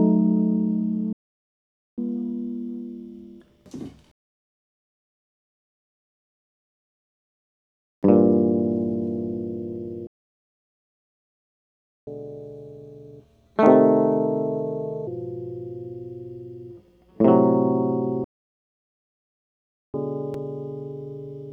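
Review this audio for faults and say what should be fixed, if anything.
The music hits three playback stalls, at 1.13 to 1.98 s, 10.07 to 12.07 s and 18.24 to 19.94 s. Each one goes silent for 0.85 s, 2 s and 1.7 s, likely because the player ran dry or got blocked. Each stall is then followed by catch-up at higher speed. From 1.98 to 4.98 s and again from 19.94 s to the end, the player runs at 1.1x, around a semitone and a half sharp. From 12.07 to 15.07 s it runs at 1.25x, roughly four semitones sharp. In each case it is resampling the backlog to win the time back. A deeper buffer with better-prioritised feeding would avoid the dropouts, and slower or pitch-preserving time-stretching would hide the recovery.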